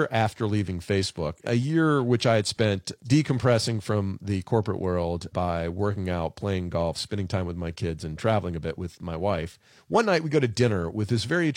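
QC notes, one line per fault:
1.38–1.40 s, corrupt frame decoded: A brief chirp-like blip just before "a year which I" lasts roughly 28 ms, about the length of a single compressed frame. The frame's bitstream was damaged, and the decoder played it anyway. Misread gain values and spectral codes put energy at frequencies that do not belong to the speech. The stray content peaks at a low level, around -35 dBFS, so it registers as a short squeak rather than a loud burst.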